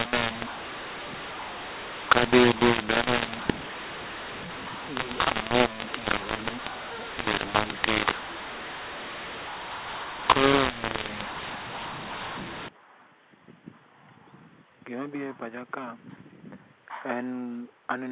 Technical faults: mu-law and A-law mixed up

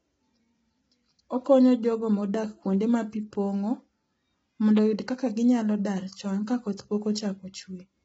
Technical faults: low-delay AAC compression

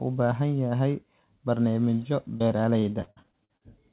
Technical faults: repeated packet loss (robotic sound)

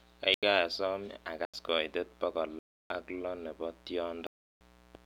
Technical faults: mains buzz; block of digital silence

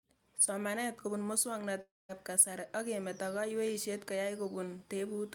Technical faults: long network dropout

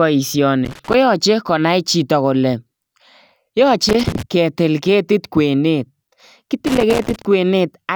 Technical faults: loose connector crackle

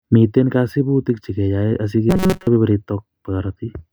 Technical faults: robotic sound from repeated short buffers

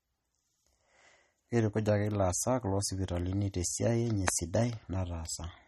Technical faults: MP3 compression

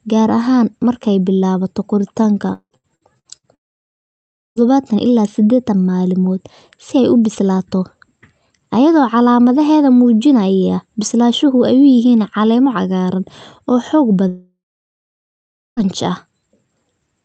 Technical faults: repeated packet loss (robotic sound); long network dropout

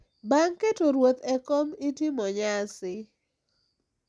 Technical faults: none

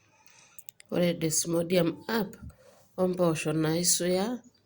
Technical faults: none

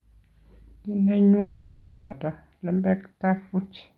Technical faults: long network dropout

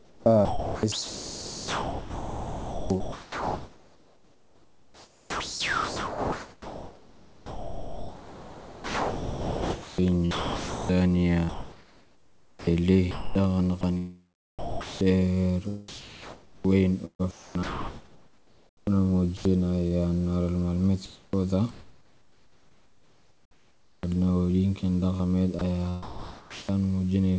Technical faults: sound chopped by the voice detector; sound dropped by the voice detector; comfort noise in place of the background; onset clipped by the voice detector

